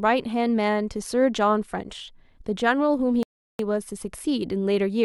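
A rebuffering stall runs from 3.23 to 3.59 s: the player ran dry of downloaded audio and paused until more arrived. The speech drops to silence for about 0.36 s, then picks up exactly where it stopped, with nothing skipped, only time added.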